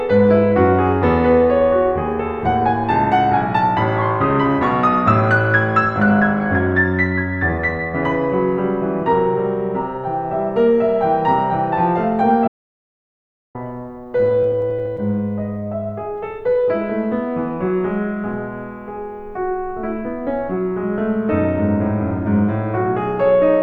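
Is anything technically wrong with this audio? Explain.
Yes, the music has two faults. From 12.48 to 13.55 s there is an audio dropout to silence, likely because the input link failed or was muted while recording continued. The music cuts to silence with no background left, and about 1.07 s is lost.

From 13.83 to 15.00 s there are repeated stalls (stutter). Packets arrived too slowly, the jitter buffer kept emptying, and the receiver stretched the last sound to cover 13 short waits of up to 16 ms, adding about 144 ms. Nothing is lost, but the music drags and stutters.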